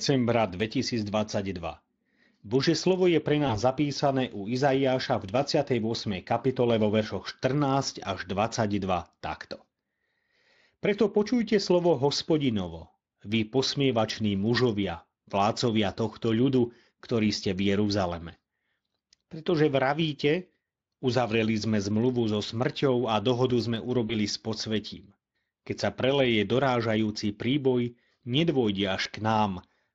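VoIP packet loss concealed by the speech codec occurs four times: at 3.47 to 3.59 s, between "slovo je pre" and "zapísané u"; at 14.15 to 14.19 s, before "mužovia vlácovia tohto ľudu"; at 24.07 to 24.14 s, between "smrťou a dohodu sme" and "s podsvetím"; and at 29.03 to 29.07 s. Each gap fits one lost 20 ms frame. The Speex decoder fills it by repeating its last pitch and filter at falling gain. This gives a brief smear, a buzzy tone or a coloured noise that fades. The speech stays weak or distorted just after each gap.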